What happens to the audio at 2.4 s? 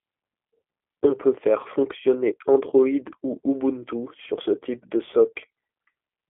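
Just after "peut faire fonctionner", from 2.35 to 2.37 s, VoIP packet loss concealed by the speech codec fills a 20 ms gap, which fits two lost 10 ms frames. The decoder extends its last pitch and filter at falling gain, so a brief buzzy tone or coloured noise that fades replaces the sound. On a waveform it appears as a short run of repeating, shrinking cycles, and on a spectrogram as smeared, flattened harmonics. The G.729 codec runs throughout at 8 kbit/s. It rebuilds the sound from a filter, a pitch predictor and sparse pulses, so the damage is plainly audible, with the speech slightly rough and synthetic, with a spectrogram band of about 250 Hz to 3.4 kHz and nothing above it.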